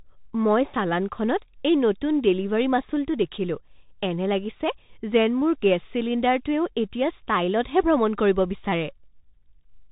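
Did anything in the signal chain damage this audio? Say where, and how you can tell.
Yes. At the codec stage, Bluetooth CVSD headset coding runs through the whole clip. Nothing passes above 4 kHz, and a granular hiss sits under the speech. Loud high sounds overload the adapting step and s sounds turn scratchy. A plain low-pass filter would stay smooth, with no hiss or step overload. The damage fits a one-bit delta stream at 64 kbit/s.

At 5.41 s, over the Bluetooth link, a headset packet is repeated. About 11.2 ms of audio was lost and the chip replayed the last packet's bits, which fits roughly three repeats at 3.75 ms intervals. This gives a brief buzz near 267 Hz rather than the silent gap of a dropout or a lone click.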